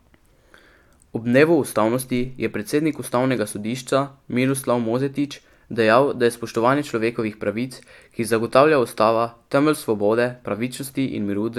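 Nothing technically wrong turns up in this bit of speech; there's no fault here to point to at any moment.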